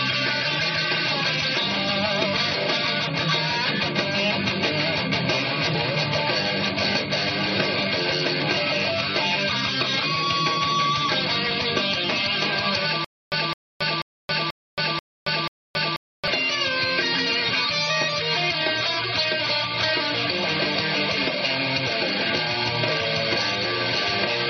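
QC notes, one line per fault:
2.25–2.27, 8.41, 17.49–17.51 and 21.85 s: compressed frames skipped. Missing or rejected frames drop roughly 0.2 to 0.5 s.
13.05–16.28 s: stutter with silent gaps. A 212 ms fragment replays six times, each followed by 274 ms of digital silence, a steady 486 ms cycle, likely from a stalled stream retrying.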